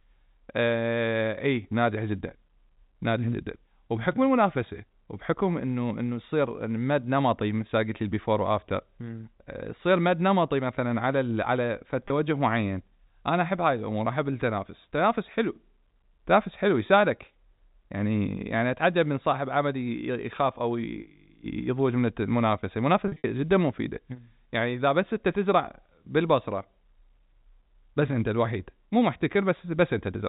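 Packet loss with pitch repetition hits this telephone-band speech twice: a single 20 ms gap at 12.08 to 12.10 s is bridged by a briefly held, buzzy repeat, while at 23.08 to 23.24 s about 120 ms goes missing in scattered runs up to 60 ms, so the repeated pitch fades toward silence before the speech returns.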